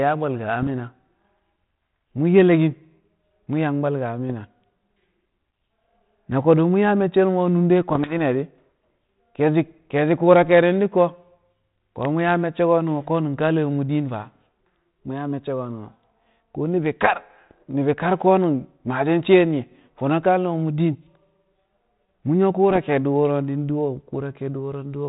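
Bit errors on an ADPCM link strike the speech at 0.61 to 0.68 s, 4.30 to 4.33 s, 7.92 to 8.20 s and 22.70 to 22.79 s, each a pop followed by a short rough burst. With only a fraction of a percent of bits corrupted, each flipped bit throws the decoder's step size and prediction off track, so the damage rings briefly. The waveform shows spikes and level jumps, and a spectrogram shows vertical broadband streaks cut off near 4 kHz, which fits a 32 kbit/s G.726 stream.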